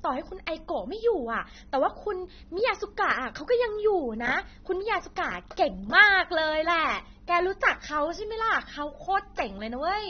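Speech throughout, with nothing above about 6.3 kHz, leaving it dull and warbly, with fizzy sibilants. That's likely AAC compression, fitting AAC-LC at a low bitrate around 24 kbps.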